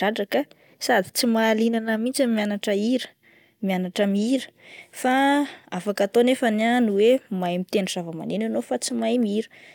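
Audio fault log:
Nothing to flag here, since this bit of speech comes through without a single problem worth logging.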